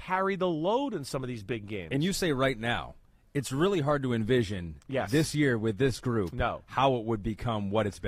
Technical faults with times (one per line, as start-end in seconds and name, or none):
4.41-8.08 adaptive stream at a lower bitrate